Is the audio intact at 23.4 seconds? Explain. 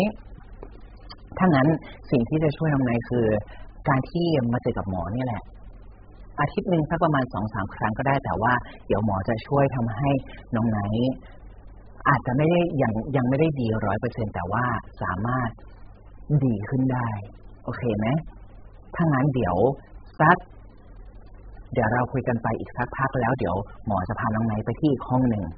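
No. At 23.4 s, as across the whole clip, the speech has likely been through heavy AAC compression, at a bitrate that sounds like about 8 kbps. The encoder discards everything above 5 kHz and coarsely quantises what remains, leaving speech dull and muffled, with smeared, warbling sibilants.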